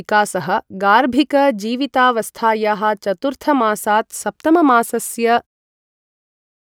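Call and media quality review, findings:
No faults found in this speech clip, just a smooth editor-style fade-out at the tail, settling in around five and a half seconds, so nothing here needs a ticket.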